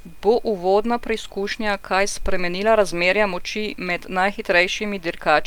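At 0.34 s a DC step shifts the zero line abruptly, giving a low thump under the speech, after which the offset decays through a 5 Hz high-pass.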